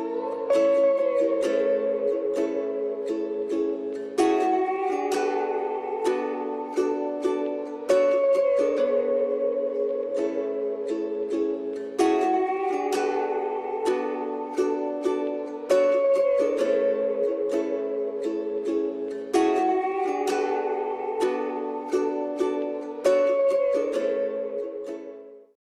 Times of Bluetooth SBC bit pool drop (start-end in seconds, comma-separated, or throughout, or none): 8.42-11.52